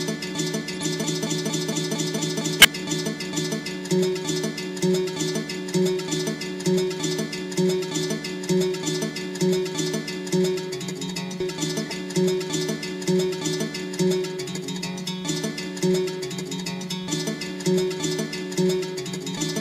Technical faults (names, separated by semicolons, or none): corrupt frame decoded